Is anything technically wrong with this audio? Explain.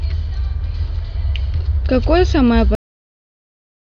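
Yes. The speech has a cut-off end at 2.75 s: the final buffers were never written, so the sound stops mid-utterance and falls straight to digital silence for the remaining 1.2 s. Unlike a fade-out or a natural pause, there is no decay or room tail.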